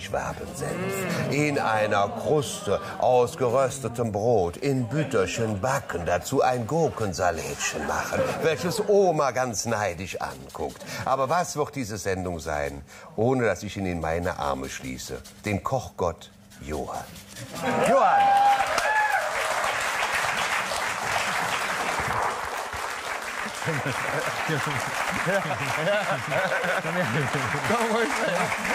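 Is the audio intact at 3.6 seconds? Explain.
Yes, the audio is intact at 3.6 seconds, with no dropout, click, distortion or other fault at that moment.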